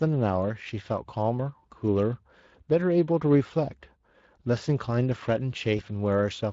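Throughout the speech, Speex codec encoding at a middling setting, which fits a bitrate near 20 kbps, leaves too few bits to model the excitation. The voice comes out plainly hoarse and noisy.

From 5.77 to 5.81 s, VoIP packet loss concealed by the speech codec fills about 20 ms of missing audio, which fits a single lost frame. The decoder stretches its last pitch and filter, so the sound briefly turns weakened and stretched before recovering.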